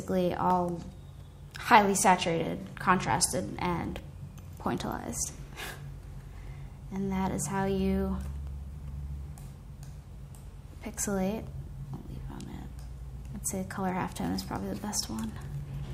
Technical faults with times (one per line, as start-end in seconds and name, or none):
0.50-15.45 periodic USB or driver dropouts